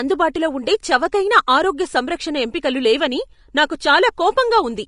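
Plainly audible lossy coding, likely Vorbis compression at a low bitrate in the region of 36 kbps, runs through the whole speech clip. It removes everything above 10.6 kHz and quantises the remaining treble coarsely, so the sound turns hissy and grainy, tones sound roughened and attacks blur.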